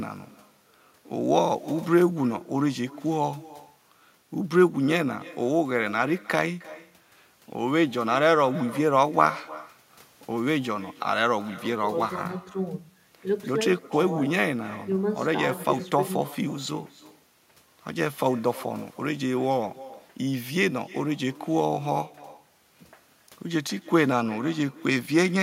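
Echo with no canceller runs through the whole recording: every phrase of the speech is trailed, roughly a third of a second later, by a faint copy sitting about 20 dB below the original. The far end is playing the call aloud on a loudspeaker, its microphone captures that playback, and nothing subtracts it before it travels back across the network. The returning copy sounds thin, like a ghost repeating each syllable.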